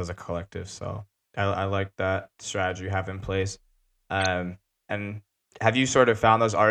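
At 4.2 to 4.26 s a corrupt frame was decoded: damaged bits in about two frames misplaced spectral energy, producing a brief, fairly loud glitch over the speech.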